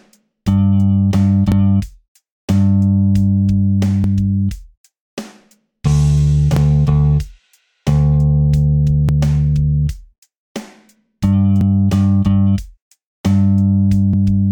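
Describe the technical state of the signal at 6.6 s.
At 6.57 to 6.59 s there is an overlapping chunks fault: a new chunk, about every 2.5 s, starts before the previous one finished, so about 23 ms of sound plays twice. It is heard as a brief stutter or click. The waveform shows a repeated segment with a discontinuity at the join, and the spectrogram shows a thin vertical broadband line.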